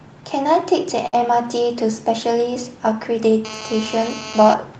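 At 1.07 s a short stall from a late packet interrupts the speech until about 1.19 s. A packet missed its playout time, the jitter buffer emptied, and the receiver held the last sound for about 54 ms before resuming where it left off. Nothing is lost, but one sound drags slightly, with a slight buzz or dip. On a spectrogram the harmonics run flat and unchanging across that stretch, and the waveform shows a briefly repeating, stationary pattern.

From 3.45 s to 4.54 s a GSM phone buzz sits under the speech, about 12 dB below it. A nearby 2G handset in an active call transmits in bursts about 217 times a second, and the audio circuitry rectifies those radio pulses into a hard, raspy drone unrelated to the talking. The spectrogram shows evenly spaced horizontal lines at 217 Hz and its multiples, up to the Opus path's 8 kHz ceiling. The waveform carries a steady train of sharp pulses.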